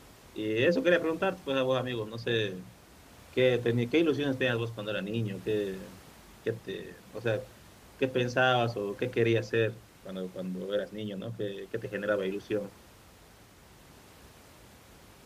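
No technical faults occur anywhere in this recording.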